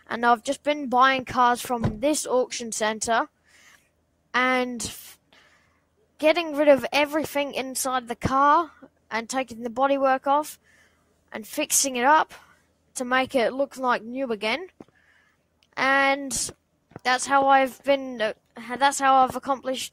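Around 3.46 to 3.8 s, 10.58 to 11.32 s, 12.46 to 12.92 s and 14.69 to 15.28 s, the noise suppressor mistakes sound for noise and ducks it, by about 10 to 12 dB at worst, so sustained parts and tails sag or get clipped short.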